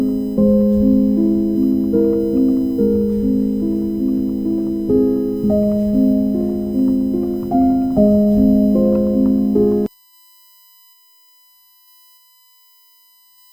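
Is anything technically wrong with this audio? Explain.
Yes, there's USB whine running the whole way through. It's a fixed-pitch tone on a 1 kHz fundamental, which lines up with the bus's 1 ms frame rate: the current drawn for each frame leaks into the audio through the power or ground. Here the energy peaks up at the 19th multiple, around 19 kHz, so it comes across as a thin, steady high whistle sitting roughly 35 dB under the audio.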